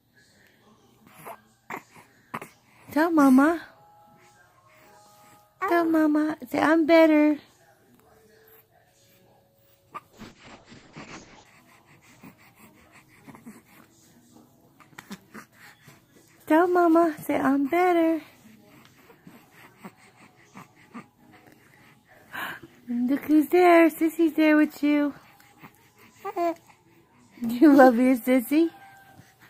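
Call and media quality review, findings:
Call bitrate drop, 10.12–11.51 s. Bandwidth estimate collapsed; the encoder was throttled hard, consistent with a fall from 64 kbps to about 7 kbps, held for 1.33 s. Audio band narrows from 20 kHz to 8 kHz; coarse, watery, muffled coding until the rate recovers.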